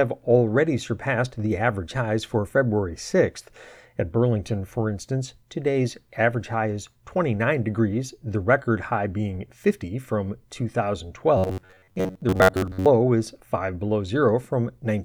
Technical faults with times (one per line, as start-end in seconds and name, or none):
11.38-12.86 robotic sound from repeated short buffers